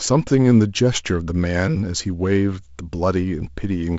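No faults; the speech carries the light upper-band hiss and slightly grainy lower band of G.722 wideband telephone coding, which fits the 48 kbit/s mode, with nothing above about 7.7 kHz.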